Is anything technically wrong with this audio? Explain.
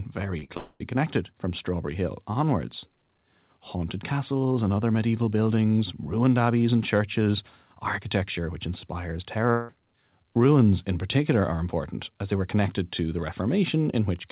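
Yes. Several stretches of the speech are missing and have been patched over. It comes through a narrowband call path with nothing above 4 kHz, which fits a G.711 telephone codec.

Short concealed packet loss, 0.38 to 0.44 s: about 40 ms of audio never reached the decoder in time. The receiver bridged the hole with 42 ms of synthesised continuation, carrying on the preceding sound and then blending back into the real signal. The result is a brief smear or wobble at the very start of the clip.

Burst of packet loss, 0.44 to 0.51 s: straight after, another 40 ms run failed to arrive, and the concealment stretched over 47 ms while fading. With the previous gap, the opening sounds like an extended buzzy or hissy blur, then picks up again further along, with the intervening sound gone.

Long network dropouts, 0.57 to 0.82 s and 9.51 to 9.71 s: the first loses about 220 ms. A fading continuation of the last sound fills 230 ms and ends in about 20 ms of silence before the audio resumes. 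The second follows "churches architecture which inspires" and loses about 180 ms, masked by a fading buzz or hiss with no silent stretch. Both are likely caused by the network delivering nothing for those spans, and the speech re-enters further on with that portion missing.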